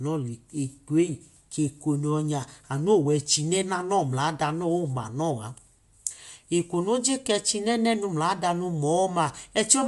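Throughout, the speech carries a grainy, breathy top and nothing above 11.6 kHz, likely Bluetooth LC3 compression.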